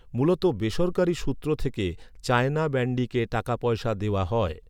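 No technical faults can be heard at any point in the speech. Nothing in the recording stands out as a fault worth marking in time.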